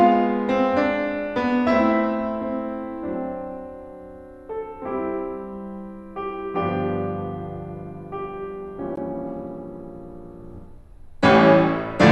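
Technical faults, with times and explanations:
8.96 s, gap at a join of encoded pieces: the music was encoded in separate pieces, about 10 s long, and butted together without removing the encoder's start-up delay or the padding on the last frame. That leftover silence opens as an 18 ms hole in otherwise continuous music, a brief dropout with edges smeared by the codec, after which the music resumes exactly where it stopped.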